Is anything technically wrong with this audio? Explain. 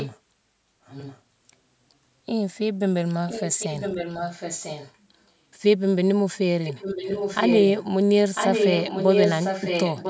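Yes, there is an echo leak. A delayed copy of the speech sits under the main signal at 0.0–0.17 s, 0.85–1.21 s, 3.27–4.96 s, 6.63–7.84 s and 8.34 s to the end. Each copy trails the original by about 1.0 s. It starts about 10 dB below the speech, drops to about 20 dB below, returns to about 10 dB below, then 5 dB below, and by the final stretch is about as loud as the speech itself. The likely cause is a speakerphone whose echo canceller let its own playback back into the microphone. Unlike room reverberation, it is a distinct repeat a full second late, not a smeared tail.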